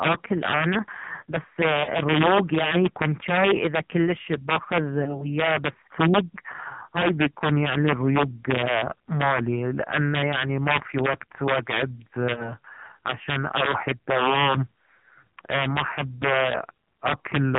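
Throughout the speech the loudest peaks crack violently, in a way that points to integer overflow. The signal is pushed about 5 dB past full scale, and instead of being held at the limit, a small share of samples wraps to the opposite sign. On a waveform those peaks jump straight from the top rail to the bottom. A spectrogram shows thin vertical broadband streaks at each one, which are far harsher than clipping's flattened tops.

The whole clip also carries heavy AMR narrowband mobile codec damage. Nothing shows above 4 kHz, so the spectrogram is an empty band over a hard ceiling. The voice is buzzy and synthetic. That degree of damage fits the low 5.9 kbps mode, where each 5 ms subframe gets only a few excitation pulses. Harmonics look smeared and blocky rather than cleanly striated.

Lost AMR speech frames occur at 1.84 to 1.89 s, between "انا بس" and "الريوق يعني يكون جاي", then at 5.04 to 5.27 s and 12.34 to 12.53 s. 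Each fits one lost 20 ms frame. The decoder repeats the last pitch and vocal tract settings at falling gain, so each one is heard as a brief warbly dip. The spectrogram shows a short stretch of frozen, repeated harmonics that fade, with the waveform envelope sagging before recovering roughly.

From 5.70 s to the end there is a section at the wrong speed. It runs at 0.893 times normal, so the voice is slower and deeper by about two semitones, which likely comes from playback against the wrong clock. On a spectrogram the harmonic spacing and formants sit lower from that point on, and syllables stretch wider in time. On the waveform the pitch periods are visibly longer.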